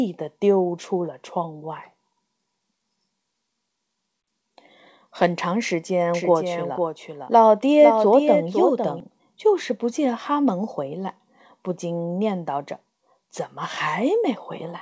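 A doubled audio track runs from 6.14 to 9.00 s: a second, full-band copy of the speech trails the original by roughly half a second, about 5 dB quieter, with no decay or room colour, and it cuts in and out abruptly at those edges. This likely comes from the audio being captured again by a slower path or from an edit leaving two misaligned copies. Throughout, nothing is heard above 8 kHz, which fits a wideband call codec such as G.722.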